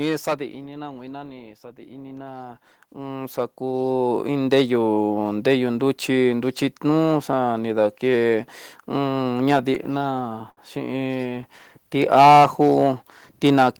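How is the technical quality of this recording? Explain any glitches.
Not great. The speech runs clipped from start to finish, the level swings twice in the first five seconds, and there are a couple of timing hiccups around the ten-second mark.

Hard clipping runs through the whole clip. The input is driven about 12 dB past what the converter or gain stage can pass, so the peaks get sliced flat. Only around one percent of the samples hit the ceiling, but those flattened tops throw off high harmonics. You hear that as a gritty crackle riding on the louder syllables, and it never lets up.

Automatic gain falling, from 0.05 to 0.99 s. The gain control decided the opening was too hot and eased its gain down by about 5 dB over roughly a second. The start comes in loud, then the speech and the room sound behind it sink together. That shared drop in the background is the giveaway that it's gain riding, not the talker backing off.

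Automatic gain rising, from 1.42 to 4.79 s. Now the control swings the other way. It judged the input too quiet and pushed the gain up by about 13 dB across more than three seconds. Voice and background swell together in a slow ramp, so the noise floor climbs right along with the speech.

Repeated stalls (stutter), from 9.15 to 9.99 s. Packets were arriving late or too slowly, so the jitter buffer kept running dry, about six times in under a second. Each time, the receiver stretched the last bit of sound until data showed up. The longest hold was only about 16 ms and the total was around 59 ms, with nothing actually lost. Still, the speech drags and catches in a choppy, uneven way.

Short stall from a late packet, from 10.50 to 10.59 s. One packet simply wasn't there when it was due, and the buffer ran empty. The receiver held the last sound for about 67 ms until it arrived, then carried on from the same point, so nothing goes missing. 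What you hear is one sound hanging on a touch too long, with a faint buzzy smear where it was extended.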